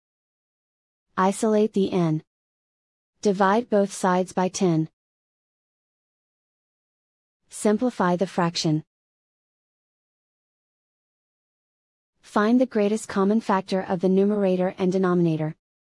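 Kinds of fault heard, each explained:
No technical faults can be heard in the signal, which holds steady throughout with no dropouts, clipping, glitches or other audible disturbances.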